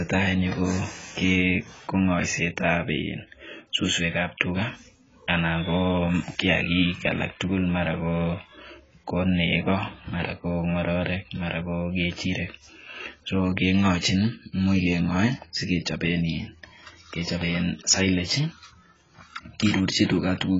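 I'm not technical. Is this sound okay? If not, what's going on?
No. From start to finish the speech sounds dull and muffled, with a swirly, fizzy texture on hissing sounds like s. The likely cause is heavy AAC compression, which squeezed the file so hard it discarded everything above 7.6 kHz, the crisp top end.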